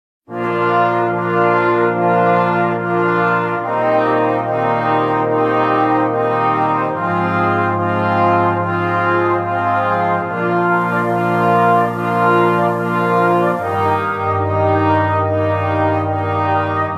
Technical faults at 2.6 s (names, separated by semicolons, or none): none